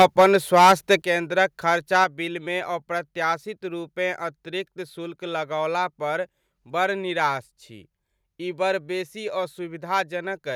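Microphone overload in this speech recording runs from 0.0 to 0.95 s, with peaks about 10 dB over the limit and a few percent of samples flattened, then briefly at 2.01–2.04 s, likely from input gain set too high. Microphone volume stepped down at 0.02, 1.02 and 2.04 s, dropping level by about 3, 8 and 4 dB, likely automatic gain control reacting to the clipping.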